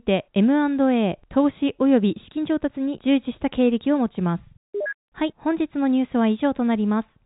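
Nothing goes wrong anywhere in this speech, which simply carries the narrow sound of ordinary G.711 telephone coding, with nothing getting through above 3.8 kHz.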